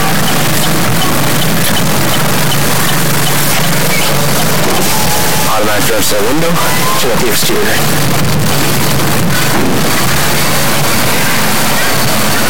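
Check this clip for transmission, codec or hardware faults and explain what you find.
One fault runs through the whole clip. Harsh, buzzy distortion and loud noise in the quiet gaps are heard throughout, likely from a stuck bit: a high-order bit held fixed, offsetting values by roughly -5 dBFS.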